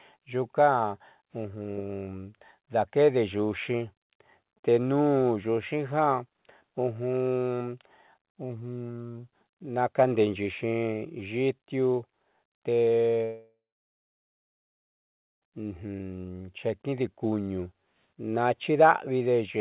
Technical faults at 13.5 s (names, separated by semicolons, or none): long network dropout